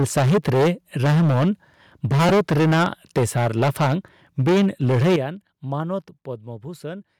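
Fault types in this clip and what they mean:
microphone overload: The microphone input was likely set too high, so loud peaks ran into the converter's ceiling and had their tops sliced flat. Here the sound overshoots the limit by about 10 to 15 dB in five stretches: 0.0 to 0.7 s, 1.02 to 1.49 s, 2.04 to 2.87 s, 3.16 to 3.94 s and 4.39 to 5.16 s. Roughly 15 to 40 percent of the samples in these stretches are flattened, giving the loudest speech a harsh, crackling, buzzy edge.
lost LE Audio frames: A single short gap in the Bluetooth LE Audio stream forced the LC3 decoder to fill in from its previous spectrum with scrambled phase rather than real data. At 2.29 s this produces a brief noisy smear lasting about 10 ms, which fits one lost 10 ms frame. Because it falls inside an overloaded stretch, it reads as a momentary grainy blip within the distortion rather than any dropout to silence.
microphone volume stepped down: Call software likely judged the microphone too hot and cut its input gain in a single jump instead of easing it. 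The speech and the background drop together at once, by about 3 dB at 3.18 s, about 11 dB at 5.16 s where an overloaded stretch ends, and about 5 dB at 6.18 s. Each step is heard as an abrupt loss of loudness, as though the speaker suddenly moved away.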